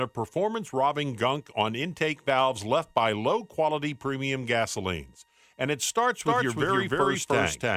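From 6.21 s to the end there's a doubled audio track: a same-level copy trailing about a third of a second behind, likely from a second, slower capture path.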